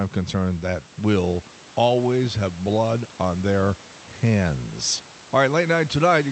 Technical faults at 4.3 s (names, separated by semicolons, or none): none